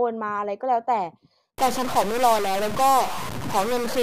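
A stuck bit starts at 1.58 s and runs to the end: the speech turns harsh and buzzy, and pauses fill with noise. One data bit is likely held fixed, shifting about half the samples by roughly -25 dBFS, flipping as quiet values cross zero.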